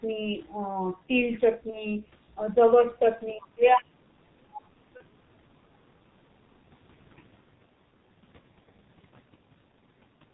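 Speech runs through a G.723.1 codec for the whole recording, at a rate consistent with its 6.3 kbit/s mode, and the damage is heavy. The voice is muffled and hoarse, and consonants smear because the codec updates its voice model only once per 30 ms frame. On a spectrogram, energy stops flat at 4 kHz. Formant bands look coarse and blocky rather than smoothly changing. Two bursts of VoIP packet loss concealed by the speech codec occur, from 1.70 to 1.85 s and from 4.97 to 5.03 s. Each fits a single lost 30 ms frame. The decoder fills each gap by repeating its last pitch and filter at falling gain, which produces a brief buzzy, fading tone. In the first event the voice stays weak and rough after the gap, because each frame is rebuilt from the previous one. On a spectrogram the concealed stretch appears as evenly spaced, unnaturally steady harmonic lines that fade out. The waveform shows a short decaying periodic segment. 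Between 3.35 and 6.09 s, about two seconds of the talker's level repeatedly drop, in places by around 35 dB. The voice dips and cuts out in pieces, which is likely speech suppressed in double talk by an echo canceller. The waveform envelope shows abrupt hollows, and the spectrogram shows speech bands thinning or vanishing in chunks.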